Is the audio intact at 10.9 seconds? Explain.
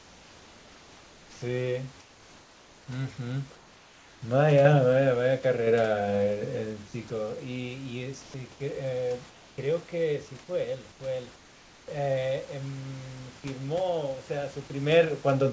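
No. From 10.92 to 11.00 s, about 80 ms of the real background is replaced by comfort noise. The sender likely paused transmission during a speech gap, and the receiver filled it with steady, featureless synthetic noise, about 4 dB quieter than the room sound it replaces.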